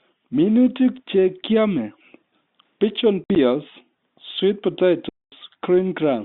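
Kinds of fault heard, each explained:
Packet loss filled with silence: parts of the stream never arrived, and the receiver played dead silence in their place. The telephone-band speech is cut by holes with abrupt edges. From 3.24 to 3.36 s, about 70 ms drops out in scattered gaps, the longest 60 ms. From 5.09 to 5.32 s, a solid 230 ms vanishes. The gaps step in 10 ms units, which fits 10 ms packets. Unlike concealment, nothing is repeated or smoothed over; the sound simply stops.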